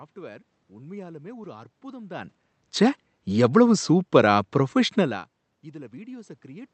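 Nothing stood out on listening; the room noise underneath and the changes in level as the talker moves, around two seconds in and again near five, belong to the recording itself.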